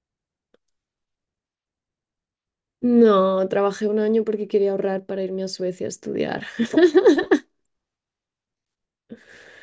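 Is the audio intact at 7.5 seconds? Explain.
Yes, the speech at 7.5 seconds is intact, with no fault there.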